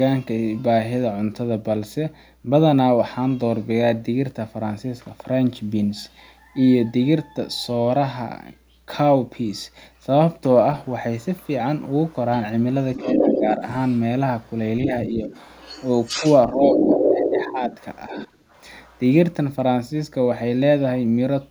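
At 11.23–11.48 s and 12.09–12.15 s, faint scraps of the other side's voice leak through, far below the talker. From 12.95 to 14.5 s and 15.26 to 18.99 s, the leak runs as loud as the talker. This is likely residual loudspeaker echo that the echo canceller failed to remove.

Speech is suppressed in double talk at 13.02–13.62 s and 14.87–15.3 s, with dips of about 5 dB. At 16.2–18.18 s, roughly a second of speech drops by up to about 10 dB. The likely cause is the canceller ducking both voices while they overlap.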